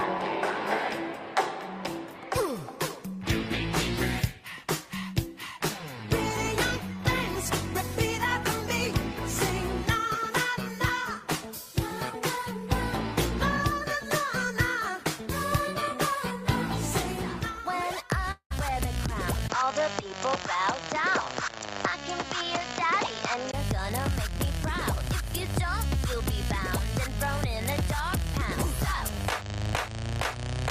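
From 18.31 to 18.52 s the sound breaks into a fading buzz that carries the last moment forward for a fraction of a second before giving way to a brief silence. When the audio resumes, roughly a fifth of a second of material is simply gone. This is most likely a long network dropout: packets stopped arriving, the receiver concealed the gap by extending what it last had, then gave up and resumed later without the lost part.

At 19.48 s there is a tiny gap of about 20 ms, after which the sound turns duller and more boxy until 23.53 s, when it clears again. Across that stretch nothing above 7.6 kHz comes through, and a new, fairly quiet background noise sits well under the signal while overall loudness stays about the same. The likely cause is the input switched to a poorer device, a narrower-band microphone or headset call profile with its own noise floor, before switching back.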